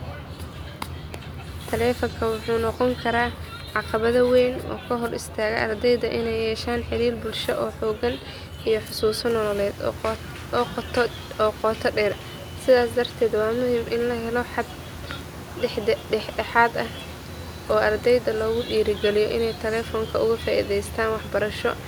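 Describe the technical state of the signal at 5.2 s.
The signal is intact at 5.2 s, with no technical fault at that moment.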